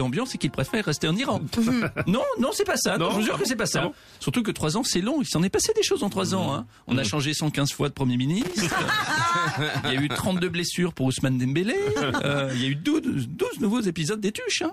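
From 8.41 to 8.77 s there is loose connector crackle. A worn contact keeps breaking and remaking, chopping the signal into an irregular burst of scratchy pops.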